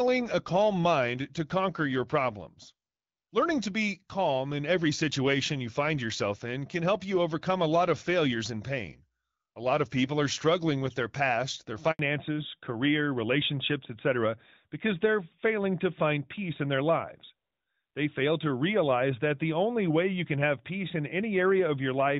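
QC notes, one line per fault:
11.91–11.99 s, handover gap: Right after "with their past their" the sound dies away and stays silent for 80 ms before the link picks up again. The call was being passed from one network to another, and no speech frames reached the receiver during the switch. The decoder had nothing to play, so it let the signal fade within a few tens of milliseconds, and whatever was said in that window is lost.
11.99 s to the end, fallback to narrowband: From the moment the gap closes, the audio loses all content above 4 kHz and turns duller and rougher than the HD Voice section before it. The new connection came up on an older narrowband codec instead of the wideband one. The sound before the switch fits AMR-WB at 12.65 kbit/s, and the sound after it points to AMR-NB at 12.2 kbit/s. Sibilants and breath lose their top end, and the voice takes on a boxed-in telephone tone.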